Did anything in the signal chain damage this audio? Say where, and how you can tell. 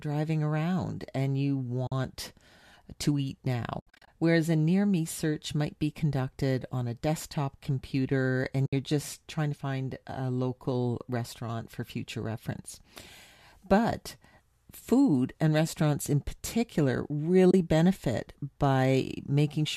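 Yes. The damage is AAC frame loss with muting in the network and decoder stage: soft dropouts at 1.87 s after "around and you", 3.80 to 4.08 s after "to eat" (scattered, longest run around 70 ms), 8.66 s to 8.73 s, and 17.51 s after "and restaurants in particular". The decoder zeroed the missing frames, and the overlapping windows faded the holes in and out. The codec's light grain likely comes from low-delay AAC.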